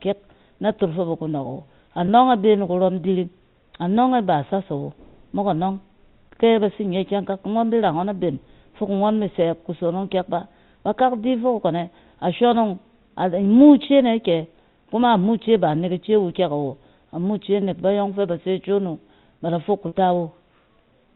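Speech over a G.711 A-law telephone path, which keeps everything below 4 kHz. It briefly holds on a slightly buzzy, frozen tone at 2.06 to 2.08 s and again, longer, at 19.88 to 19.92 s. This is packet loss with pitch repetition: the receiver looped the last pitch period to cover about 20 ms and then 40 ms of missing audio, which fits one and then two dropped packets.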